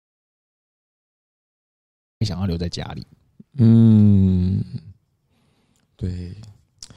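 From the very start until 2.21 s, the clip is an audio dropout to silence: the speech is absent and the gap holds silence with no room tone at all, so the voice seems to arrive abruptly at 2.21 s rather than beginning naturally. The likely cause is a lost input, such as a disconnected device or stray mute, while the recorder kept writing silence. On a waveform this reads as a flat line, and a spectrogram shows an empty black band across every frequency before the signal appears.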